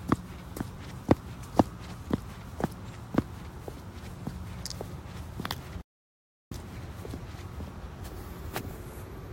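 Everyday sound that cuts to dead silence, with no room tone, from 5.81 to 6.51 s: an audio dropout to silence, likely a lost input.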